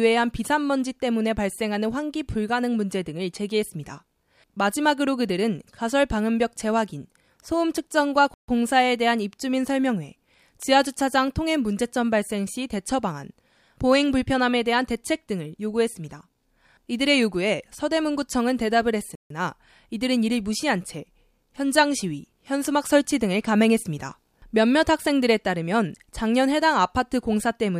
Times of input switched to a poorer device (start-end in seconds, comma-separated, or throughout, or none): none